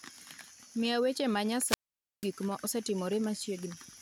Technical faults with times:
1.64-2.30 wireless microphone squelch dropout

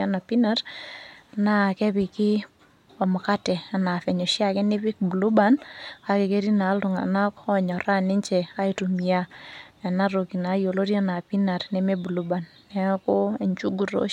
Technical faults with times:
none

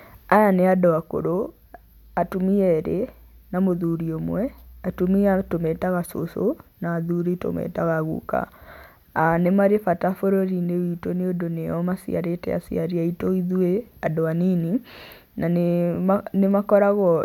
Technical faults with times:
none

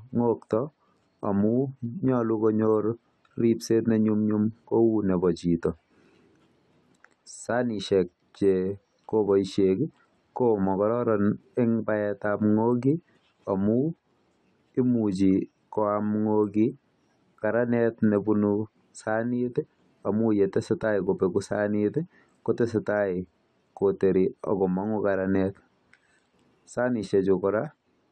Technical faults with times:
none

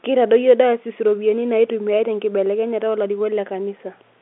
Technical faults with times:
none

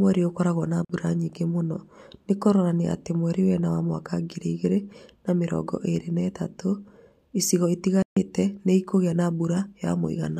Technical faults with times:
0.85-0.90 Bluetooth dropout
8.02-8.17 Bluetooth dropout

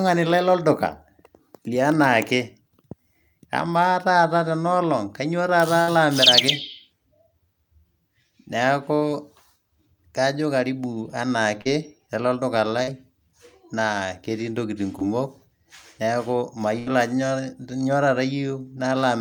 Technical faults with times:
5.81-5.89 burst of packet loss
8.95-9.03 burst of packet loss
11.61-11.67 short concealed packet loss
12.83-12.89 short concealed packet loss
14.99-15.03 short concealed packet loss
16.79-16.88 burst of packet loss

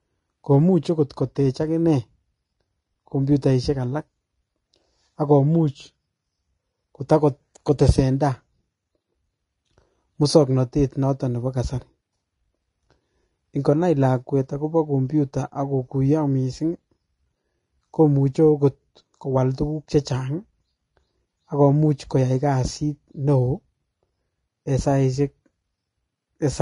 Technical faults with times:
0.00-26.62 Vorbis compression

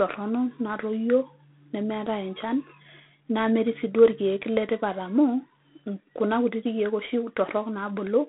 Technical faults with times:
0.00-8.28 G.726 ADPCM

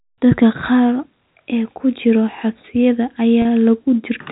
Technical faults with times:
3.42-3.45 packet loss with pitch repetition

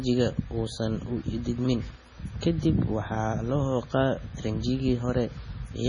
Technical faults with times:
0.00-5.88 MP3 compression

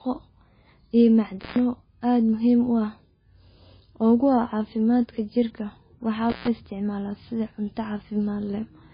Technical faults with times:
0.00-8.93 MP3 compression
1.40-1.59 intermittent contact
6.30-6.48 intermittent contact

